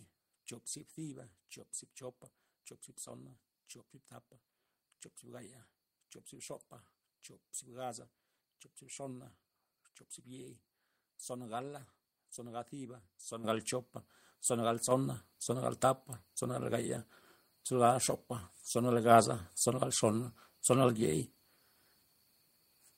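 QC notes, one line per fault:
13.44 s and 14.91 s, microphone volume stepped up: the input level on the microphone was raised in two abrupt steps, about 9 dB then about 6 dB, so the speech and the room noise behind it jump louder together and stay there.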